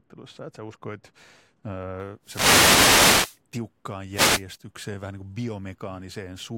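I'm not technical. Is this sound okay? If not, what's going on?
No. De-emphasis applied wrongly affects the first two seconds, from 0.0 to 2.0 s. A treble-cutting step, meant to undo a treble boost that was never added or had already been undone, was applied to the speech anyway. The highs are pulled down steadily toward the top of the range, so that opening stretch sounds dull and muffled, as if the speaker were behind a thick curtain, and the crisp edges of consonants lose their bite.

Wireless microphone noise hits occur from 2.22 to 3.4 s and again from 4.11 to 4.44 s. The radio link from a wireless microphone briefly weakened, probably because reflected signals cancelled the direct one. The receiver's own hiss then rose, so each hit comes through as a swish or burst of static over the voice. The first is the longer one, more than a second; the second is a short flick.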